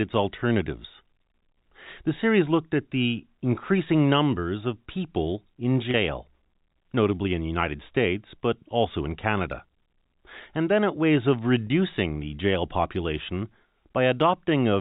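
Packet loss with pitch repetition at 5.91–5.94 s and 11.67–11.70 s: each 30 ms gap, consistent with one lost packet, is bridged by repeating the last pitch period, giving a brief buzzy hold that shows as identical repeated cycles in the waveform and flat, smeared harmonics on a spectrogram.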